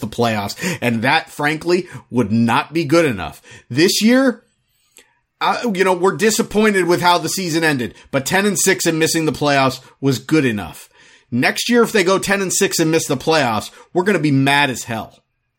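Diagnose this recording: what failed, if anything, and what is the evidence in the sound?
Nothing in the recording points to a failure anywhere in the chain. No stage, from wiring and conversion through to storage and playback, leaves an audible mark on the speech.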